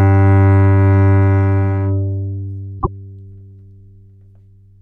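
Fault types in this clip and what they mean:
Frames out of order: two neighbouring blocks, apparently single frames of about 26 ms, were decoded in swapped order, so 2.79–2.88 s flutters.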